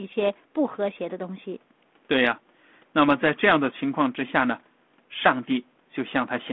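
Nothing here counts as a fault: the speech comes through a call's microphone processing and a G.726 ADPCM link at 32 kbit/s, confined to the telephone band of roughly 200 Hz to 3.5 kHz, with only the light coding roughness that such a path leaves.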